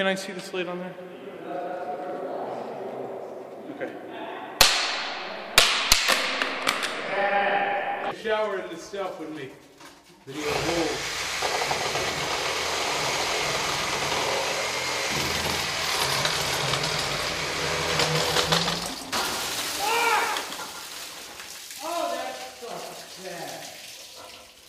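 A doubled audio track begins abruptly at 17.65 s and runs to the end. A second full-band copy trails the original by roughly 150 ms, about 5 dB quieter, with no decay or room colour, likely from a slower second capture path or misaligned edit.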